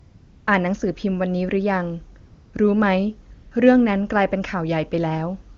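From 0 to 0.47 s, 2.19 to 2.53 s, 3.33 to 3.51 s and at 5.55 s, AMR comfort noise replaces the real background. The phone detected no speech, stopped sending frames and the receiver synthesised smooth, steady hiss instead, gated in and out at these pauses. On a spectrogram these stretches show as flat, featureless noise bands. The AMR wideband (HD Voice) path gives clear speech between them.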